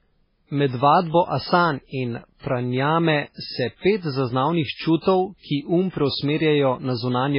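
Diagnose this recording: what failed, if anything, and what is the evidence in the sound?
Throughout the speech there is a watery, swirling texture, and the top end stops dead near 5.3 kHz. This points to the codec stage, likely MP3 compression at a very low bitrate, around 16 kbps, where the encoder discards treble and drops weak spectral detail.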